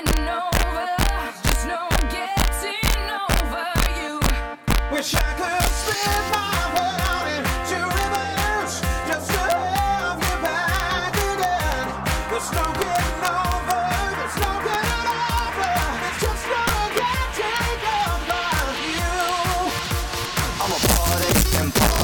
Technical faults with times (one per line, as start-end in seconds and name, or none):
0.00-22.03 integer overflow
14.74-14.77 loud pop
16.67-16.70 loud pop